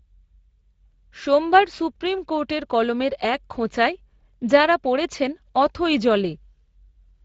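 Speex codec damage runs through the whole speech clip, from the first moment to the last. This CELP coder rebuilds speech from a predicted vocal-tract filter driven by a coarsely coded excitation, and the bit budget here points to a rate of around 20 kbps. With that excitation only approximated, the coding damage is plainly audible: the speech carries a grainy, hoarse texture over the voice.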